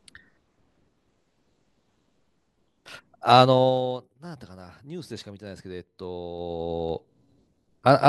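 Zipper noise at 3.39 to 3.99 s and 6.36 to 7.42 s in this speech clip: the level falls, then rises, by roughly 15 dB in audible steps of about 2 dB, each step clicking into a ticking zip.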